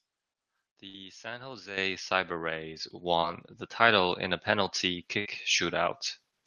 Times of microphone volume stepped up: 1.77, 2.79

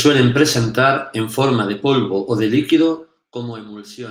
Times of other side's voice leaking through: none

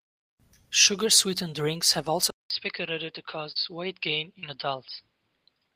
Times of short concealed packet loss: 3.51-3.58, 4.39-4.45

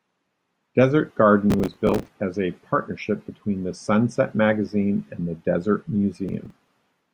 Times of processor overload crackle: 1.50-2.08, 6.28-6.68

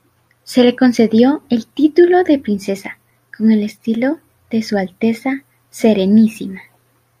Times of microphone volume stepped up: none

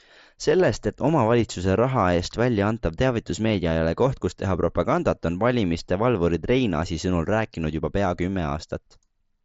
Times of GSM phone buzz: none

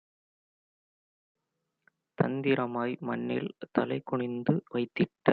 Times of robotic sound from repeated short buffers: none

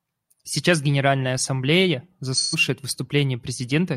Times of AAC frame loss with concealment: 2.33-2.56

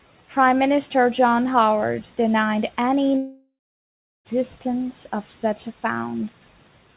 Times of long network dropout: 3.17-4.27

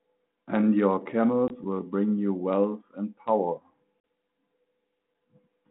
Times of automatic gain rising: none

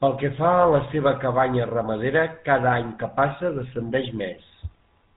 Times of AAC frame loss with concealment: none

